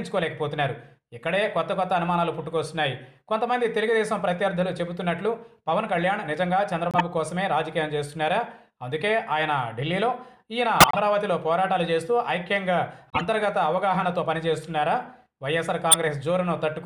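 A corrupt frame was decoded four times: damaged bits in the compressed stream reached the decoder, which played those frames as if they were valid, so misread gains and codes put energy at wrong frequencies. Each hit is a sharp chirp or noisy blip peaking around -10 dBFS, at 6.91 to 7.01 s, 10.80 to 10.99 s, 13.10 to 13.21 s and 15.91 to 15.95 s. The longer bursts suggest several consecutive frames were damaged.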